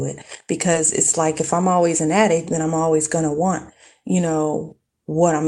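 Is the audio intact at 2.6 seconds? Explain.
No. From 2.53 to 2.63 s, between "I'm always an addict" and "I'm always going to", the speech turns briefly rougher and noisier without any gap. This is a lost packet rebuilt from error correction: later packets carried low-bitrate copies, which the decoder played instead, about 60 ms in all.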